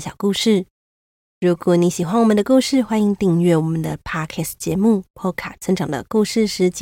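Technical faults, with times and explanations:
Nothing faulty is audible anywhere in this speech.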